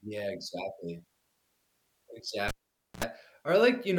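Cable pulled and plugged in, from 2.48 to 3.04 s: a pop cuts the speech, about 0.51 s of near silence follows while the connection is open, then 73 ms of 60 Hz mains buzz as only the plug tip makes contact, and a second pop brings the sound back.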